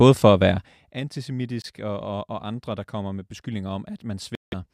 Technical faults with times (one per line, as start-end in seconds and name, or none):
0.49-1.01 zipper noise
1.62-1.65 Bluetooth dropout
4.35-4.54 Bluetooth dropout